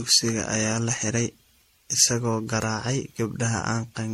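Speech with generation loss throughout: swirly, hollow and smeared, blurred attacks, nothing above 16.4 kHz, likely from repeated MP3 re-encoding, around ten passes, consistent with 64 kbit/s.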